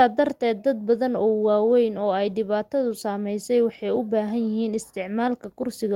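Nothing in this short bit of speech stands out as a technical fault; it just runs along without any glitch worth pointing to.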